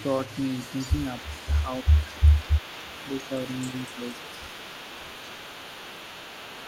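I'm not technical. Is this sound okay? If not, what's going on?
No. On the far end of this call, a loudspeaker's sound was most likely picked up by the microphone and not fully cancelled, an echo leak. Throughout the clip, you hear a faint copy of the speech trailing about a quarter of a second behind the original.

The echo cancelling also likely struggled when both sides talked at once, so speech was suppressed in double talk. From 1.22 to 1.39 s and again from 1.64 to 2.78 s, the voice dips noticeably quieter in patches.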